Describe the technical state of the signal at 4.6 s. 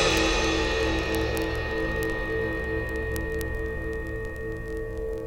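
Word clock ticks run through 4.6 s, part of a train lasting from 0.11 s to 5.25 s. The receiving device reads the digital link on its own clock, which is not locked to the sender's and drifts by roughly 0.1 percent. Each time the two clocks slip past one another, a single sample is dropped or repeated. In this music, that produces a steady rattle of sharp ticks about every 20 ms, some two hundred in all.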